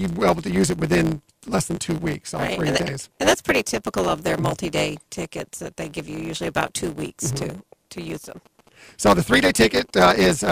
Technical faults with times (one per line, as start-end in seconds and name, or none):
0.00-10.52 block size mismatch (truncated)
8.02-9.99 GSM signalling bursts